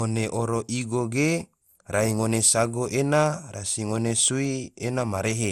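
Across the whole speech clip the sound is swirly, hollow and smeared, with softened consonant attacks and nothing above 17.3 kHz. This is likely generation loss, with the sound re-encoded around seven times in what points to MP2 at 96 kbit/s. The repeated passes stack their artefacts, so it sounds worse than a single encode at that rate.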